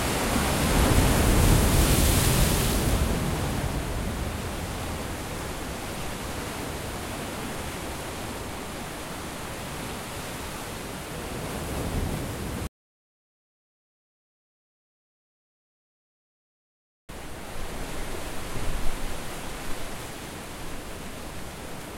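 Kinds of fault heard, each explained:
Audio dropout to silence: At 12.67 s the sound cuts off abruptly and gives way to silence, with no background noise at all. It resumes mid-flow at 17.09 s. About 4.4 s of sound is lost, likely through a lost input link.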